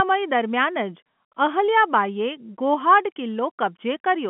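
Telephone speech carried in G.711 mu-law at 64 kbps, with the usual narrow line band of roughly 150 Hz to 3.4 kHz and nothing present above 3.8 kHz, shows no technical faults.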